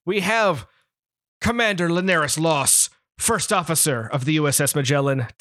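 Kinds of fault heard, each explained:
Bluetooth SBC bit pool drop: From 1.95 s to 4.77 s the speech turns dull and gritty. The top sub-bands lose their bits, so the treble falls away, and the bands that remain are coarsely quantised, which adds a rough noise. This fits the encoder cutting its bit pool from 28 to 10, near 84 kbps. A plain low-pass filter would dull the sound without adding grit, and packet loss would leave gaps rather than steady coarseness.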